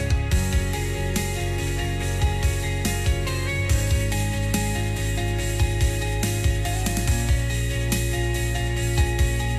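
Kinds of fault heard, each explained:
No technical fault can be heard in this audio. There is nothing in the clip that calls for a name or an explanation here.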